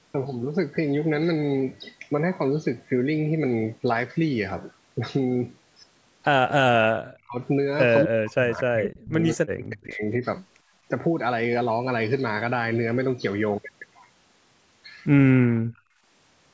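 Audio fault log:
6.49–6.74 s, 7.03–7.39 s and 8.05–10.02 s: speech suppressed in double talk. The echo canceller likely mistook near-end talk, heard alongside the far side, for loudspeaker echo and clamped the microphone. Speech dips by about 40 dB, the last stretch lasting about two seconds.
15.35–16.02 s: background gated by the echo canceller. While the loudspeaker was playing, the canceller pulled the microphone down hard, so the room sound drops by about 36 dB for roughly 0.7 s, then returns once the canceller releases.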